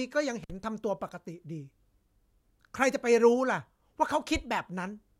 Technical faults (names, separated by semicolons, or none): intermittent contact